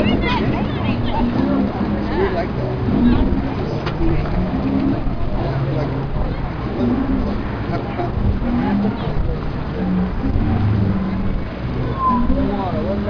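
No technical faults can be heard anywhere in this audio.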